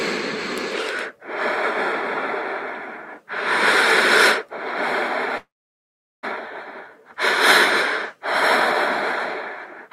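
From 5.37 to 6.25 s a call audio freeze holds the sound: it trails off as a fading buzz or hiss, then falls silent for about 0.76 s. Unlike a dropout, nothing is lost. The audio resumes where it stopped, now 855 ms late, likely because delayed packets emptied the jitter buffer.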